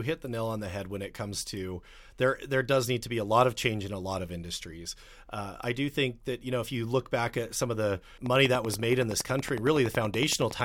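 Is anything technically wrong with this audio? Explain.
Yes. From 8.26 to 10.62 s, a train of clicks ticks over the speech. About thirty regular pulses arrive at 10.7 per second, likely from interference by nearby equipment.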